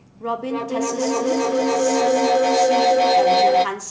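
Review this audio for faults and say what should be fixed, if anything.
Feedback howl from 0.49 to 3.82 s: two devices in one room close a microphone-to-loudspeaker loop with gain above unity, so a tone near 700 Hz builds to about 12 dB over the speech, with the loop repeating roughly every 300 ms. To prevent it, mute one device or keep a single device on the call in that room, and use headphones or echo cancellation.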